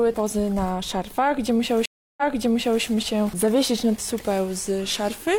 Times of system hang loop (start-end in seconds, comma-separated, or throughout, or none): none